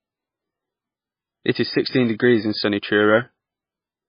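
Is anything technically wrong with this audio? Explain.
Yes, all the way through it sounds like heavy MP3 compression, likely from a very low bitrate around 14 kbps: nothing above 5.1 kHz, and the speech turns watery and swirly as weak frequency lines switch on and off.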